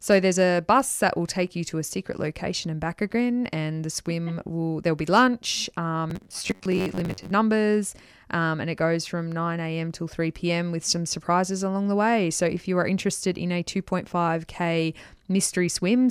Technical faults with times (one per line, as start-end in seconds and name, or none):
6.10-7.31 robotic sound from repeated short buffers